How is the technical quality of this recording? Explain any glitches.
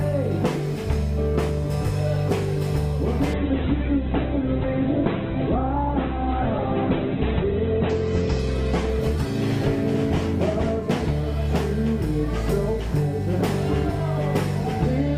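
The recording has one clear fault, a call bitrate drop from 3.35 s to 11.47 s. The call's bandwidth estimate fell, so the encoder was forced onto a much smaller bit budget, consistent with a slide from a high rate to around 8 kbps. It codes coarsely and trims the top end, narrowing the audio band from about 20 kHz to 4 kHz. The sound turns muffled and rough, worst for about 4 seconds, before the bitrate recovers.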